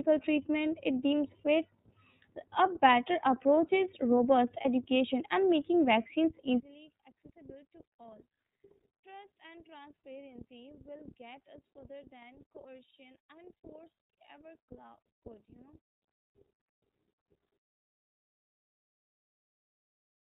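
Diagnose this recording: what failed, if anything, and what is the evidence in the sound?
Throughout, the speech sounds muffled and slightly rough and synthetic, with nothing above 4 kHz. This is the iLBC codec stage, coding 30 ms frames at 13.33 kbps.

At 4.61 s there is a brief held, buzzy vowel lasting about 30 ms. A lost iLBC frame on the network was concealed by a repeated pitch cycle, and the speech recovers immediately.

From 6.60 s to the end, the speech drops by about 28 dB to a faint residue. The likely cause is one channel inverted in the wiring, cancelling the centred speech when summed to mono.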